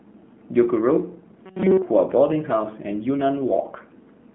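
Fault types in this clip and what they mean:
AMR narrowband mobile codec: Throughout, the speech comes through a 2G/3G mobile speech coder at 7.4 kbps. Only about 150 Hz to 3.5 kHz survives, so it sounds muffled and thin. The low bitrate leaves a plainly audible buzzy, synthetic edge from the vocal-tract model.
Robotic sound from repeated short buffers: From 1.46 to 1.82 s the speech collapses into a rigid metallic buzz at 188 Hz. The likely cause is audio arriving too late, with the same roughly 5 ms piece repeated over and over while the real sound is skipped.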